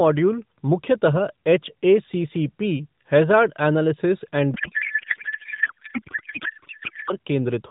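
From 4.54 s to 7.13 s a codec payload misread sets in: AMR frames packed in octet-aligned form are being unpacked as bandwidth-efficient, so the decoder pulls every parameter from the wrong bits. The speech collapses into garbled noise and warble that barely follows it.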